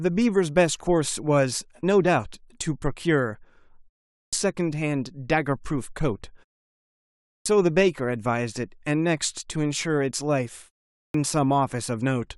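At 4.24, 7.38 and 11.06 s there's a clipped start after a pause: the output drifts to sleep across gaps of 0.43, 1.02 and 0.44 s, then needs 76 to 87 ms to wake, so each phrase jumps in abruptly with its opening sounds missing.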